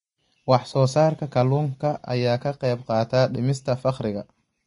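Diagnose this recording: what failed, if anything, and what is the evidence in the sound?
The failure is at the codec stage, and it runs through the whole speech clip: nothing is present above 10.6 kHz, and the treble that remains is hissy and grainy, with consonant attacks smeared. This is likely Vorbis compression at low quality. The encoder lowered its cut-off and quantised the upper bands so coarsely that fine detail was replaced by noise of similar energy. The damage level fits a low bitrate of around 33 kbps.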